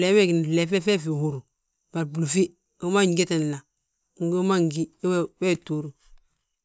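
No technical faults can be heard anywhere in the recording. The speech gives a listener nothing to flag on technical grounds.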